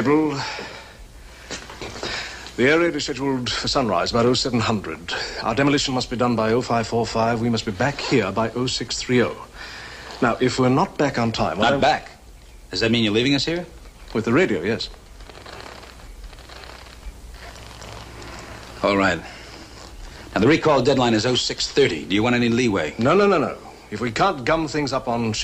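Nothing stood out as a technical fault on listening.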